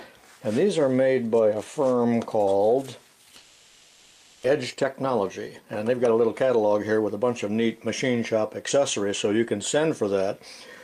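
From 3.37 to 4.46 s the sound smears into a fading buzzy hiss rather than going silent. That's likely a long network dropout: nothing arrived, so the receiver kept stretching the last sound for about a second, and around 600 ms never gets played. Right after, from 4.48 to 7.49 s, there's a jitter buffer speed-up. The backlog that piled up gets drained by trimming short pitch-period slices, so the audio runs about 115% fast at the same pitch and sounds rushed until roughly half a second of delay is gone.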